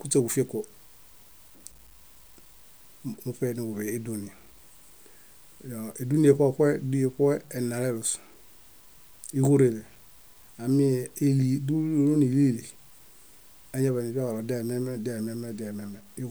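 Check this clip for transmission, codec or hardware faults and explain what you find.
One fault runs through the whole speech clip. From start to finish a grainy, gritty distortion rises and falls with the speech, sitting roughly 30 dB below the signal, and the quietest moments sputter or fall to silence. The likely cause is low bit depth without dither: the samples were truncated, which fits 8 bits. That truncation error follows the waveform instead of spreading as a steady, even hiss.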